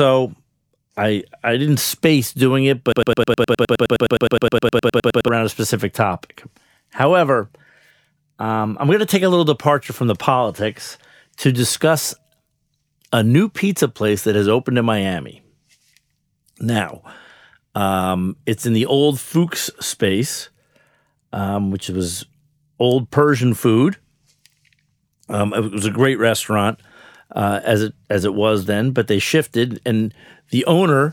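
Right after "didn't space doing it", from 2.92 to 5.28 s, a broken-record loop repeats a 104 ms fragment 23 times. A stalled player or stream likely resent it. Then "a specific topic" resumes.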